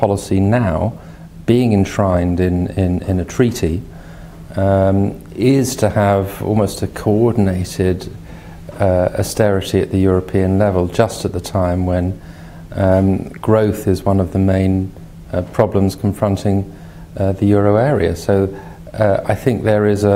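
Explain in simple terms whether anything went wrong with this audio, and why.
A faint, steady ticking runs through the sound from 0.16 to 19.96 s, a couple of ticks every second. These are clock slip clicks, likely from two devices running on slightly mismatched clocks, so a single sample gets dropped or repeated whenever the drift adds up.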